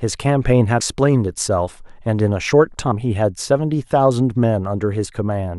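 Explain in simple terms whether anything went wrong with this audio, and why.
There are two spots where compressed frames were skipped in this speech, at 0.79 s and 2.90 s. The sound jumps ahead, losing roughly a tenth of a second the first time and about 150 ms the second, which fits a handful of 23.2 ms frames being dropped.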